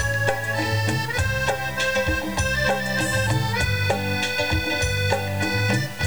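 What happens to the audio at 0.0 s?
From 0.0 s the sound is grainy and gritty, tracking the signal, with noise roughly 20 dB down. The likely cause is low bit depth without dither, consistent with 6-bit truncation.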